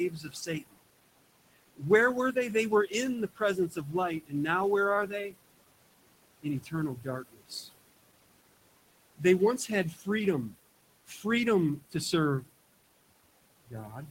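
Noise suppressor artifacts run through the whole recording: the room noise, sitting about 17 dB below the speech, is pulled down by about 20 dB in the gaps and swells back under each phrase. On a spectrogram the background fades to dark blotches between phrases and reappears in patchy, speckled bands under the speech.

Speech cut by the noise suppressor happens at 0.1–0.77 s, 1.57–4.33 s, 5.07–5.37 s, 6.42–7.7 s, 9.18–11.25 s, 11.9–12.46 s and 13.65–14.1 s. Within each span, between about 0.1 and 0.5 s in total of soft speech detail was mistaken for noise and dropped by about 15 to 21 dB, so consonants and endings sound swallowed. The waveform shows sudden dips there, and the spectrogram loses its faint high-frequency energy.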